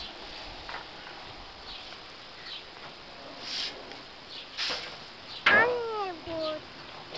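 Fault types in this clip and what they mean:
No faults are present.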